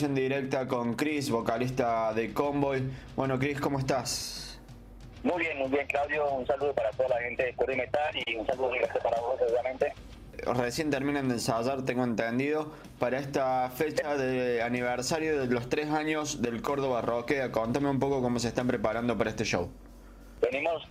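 At 8.23 to 8.27 s, about 30 ms of audio failed to reach the decoder in time, a short concealed packet loss. The receiver patched the gap by extending the preceding sound and blending back into the real signal, leaving a brief smear or wobble.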